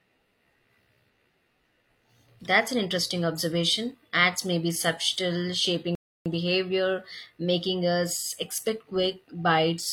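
Speech clip with one rebuffering stall: at 5.95 s the audio drops to silence for about 0.31 s, then picks up exactly where it stopped, so the player ran dry and waited for more data.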